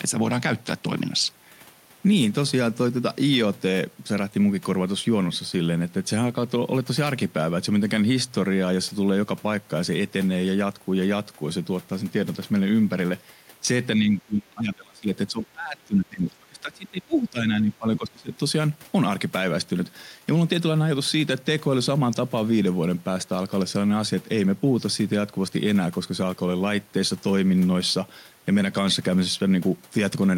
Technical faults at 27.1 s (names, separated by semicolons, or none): none